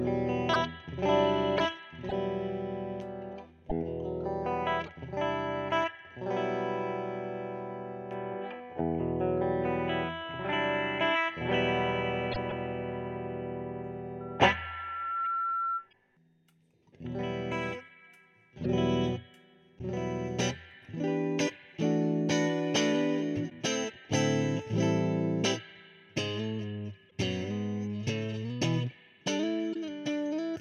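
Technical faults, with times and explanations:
14.20 to 15.89 s, loudspeaker feedback squeal: a single tone at 1.4 kHz rises out of the sound over roughly a second and then holds at about the same level as the programme until it stops. The microphone is hearing its own loudspeaker, and at this one frequency the loop returns more than it sends, so the tone keeps feeding itself. On a spectrogram it shows as one bright horizontal line that brightens as it builds, and the waveform envelope swells over the same stretch.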